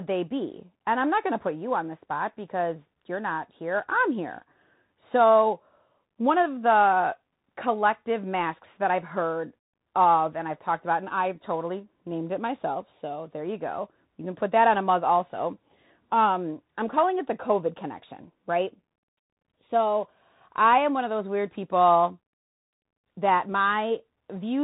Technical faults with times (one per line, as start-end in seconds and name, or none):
0.00-24.64 Bluetooth CVSD headset codec